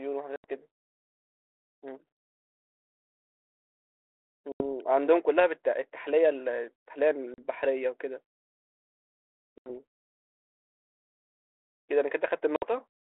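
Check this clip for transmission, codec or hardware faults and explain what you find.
The speech has five short dropouts from packet loss on an ADPCM call, at 0.36, 4.52, 7.34, 9.58 and 12.56 s, lasting 80, 80, 40, 80 and 60 ms, each about a few 20 ms packets. The G.726 link, band-limited to 300 Hz to 3.4 kHz, carries it.

Packet loss on an ADPCM call: the lost packets become silence. Afterwards the decoder's predictor and step size disagree with the sender's, so the speech returns slightly distorted before it settles. On a waveform each dropout is a flat gap with vertical edges. On a spectrogram it is a blank vertical band.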